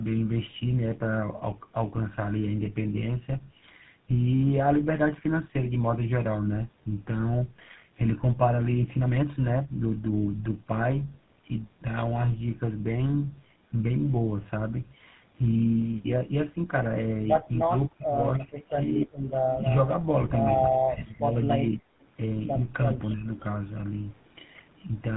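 It's a speech recording with tandem speech coding running the whole way through: it sounds like two passes through GSM full rate with a G.711 A-law hop in between. Each encoder chews on the previous one's damage, so it's rough, warbly and muffled, with nothing above 3.9 kHz. From 17.63 to 19.15 s the speech is suppressed in double talk, with chunks adding up to well over half a second pulled down by as much as around 40 dB, and again from 22.83 to 23.29 s, briefer and only around 15 dB. That's likely an echo canceller ducking the talker because it can't tell the talker's voice from the far end's loudspeaker echo while both sides are talking. There's also echo leak, a copy of the voice arriving 301 ms late. At 19.51 to 19.73 s it's about 10 dB under the speech, and at 22.01 to 22.05 s it's a barely-there trace at about 35 dB down. It's likely loudspeaker pickup that the far end's canceller didn't fully remove.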